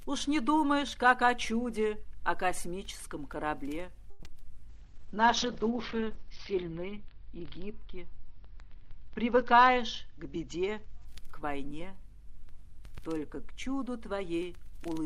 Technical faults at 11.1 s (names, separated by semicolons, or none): call bitrate drop